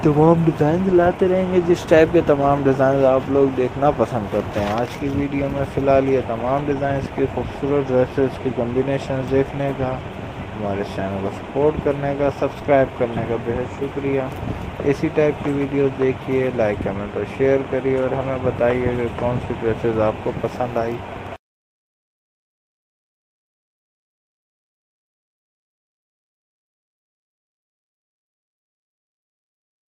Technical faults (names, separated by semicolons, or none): none